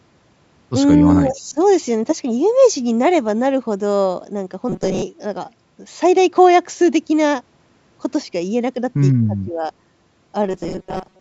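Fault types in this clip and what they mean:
Speech suppressed in double talk: at 1.04 to 1.6 s and 9.27 to 9.71 s the speech dips by about 15 dB and then about 25 dB, for a total of roughly 0.4 s each time. The likely cause is an echo canceller ducking the near talker while the far side also spoke.
Robotic sound from repeated short buffers: at 4.69 to 5.02 s and from 10.46 s to the end, the speech becomes a rigid metallic buzz at 188 Hz. This likely comes from late audio being replaced by repeats of a roughly 5.3 ms buffer, covering most of the first stretch and about half of the second.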